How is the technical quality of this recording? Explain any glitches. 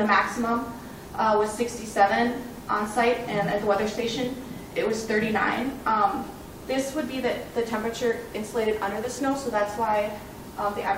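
No technical glitches can be heard anywhere in the recording, and the signal holds steady throughout.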